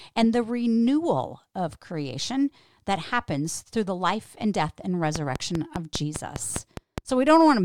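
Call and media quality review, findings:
Train of clicks, 5.16–6.99 s. About ten even clicks, 4.9 per second, about 15 dB above the speech. Likely interference from nearby equipment or a faulty connection or power supply injecting a regular pulse.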